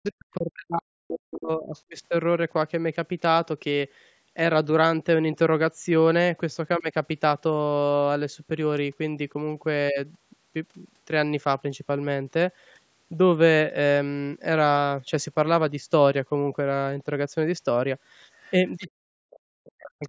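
Speech, with the talker's voice collapsing at the start and at the end. From 0 to 1.93 s, and again from 18.86 s to the end, the level dips in pieces, at worst by around 40 dB. That is speech suppressed in double talk. The echo canceller likely could not separate the talker from the loudspeaker echo, so it turned both down. Short scraps of the other side's voice leaking through sit at 1.74 to 1.81 s, 18.43 to 18.52 s and 18.82 to 18.90 s. They are faint, far below the speech. The cause is likely echo the canceller failed to remove from the microphone.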